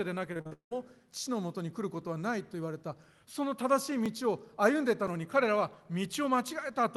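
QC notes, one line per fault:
0.33–0.73 s, repeated packet loss (robotic sound): five gaps in under half a second, the longest about 0.18 s, leave roughly three quarters of this stretch concealed rather than real. Each hole is filled by stretching the last received sound, so the speech turns choppy. Unlike a driver dropout, the gaps are long, and they are smeared over with repeated sound instead of clicking.
0.99–6.10 s, periodic USB or driver dropouts: about seven tiny losses, each roughly 2 ms, recur every 1.02 s. The missing samples are skipped rather than patched, so the waveform jumps and each event is a short tick or pop, heard only while speech is present. The strict clockwork spacing and very short, unsmoothed breaks set this apart from network packet loss, which comes in irregular bursts and is covered by stretched, robotic-sounding fill.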